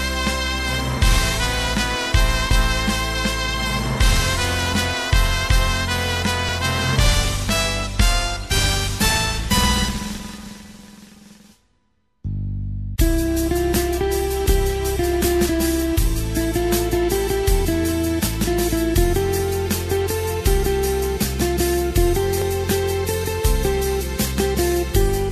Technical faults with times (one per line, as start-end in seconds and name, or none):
2.51 overlap between stream segments
6.49 overlap between stream segments
10.46 overlap between stream segments
14.46 overlap between stream segments
18.44 overlap between stream segments
22.42 overlap between stream segments